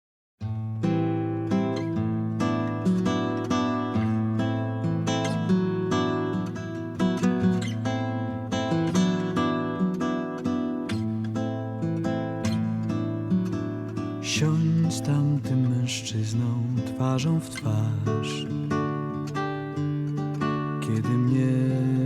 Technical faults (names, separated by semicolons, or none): none